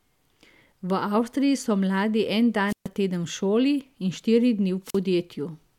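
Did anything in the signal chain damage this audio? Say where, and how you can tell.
Yes, the wireless link: two squelch dropouts at 2.67–2.88 s (about a 130 ms mute) and 4.84–4.99 s after "šoli in štiri dni", hiss swelling as the RF fades, then silence.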